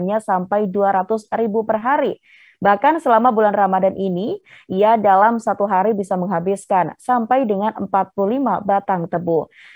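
Throughout, the resampler restarted on every block. Each 10 ms block was converted from 48 kHz to 44.1 kHz alone, leaving edge errors. A 100 Hz buzz rides the sound.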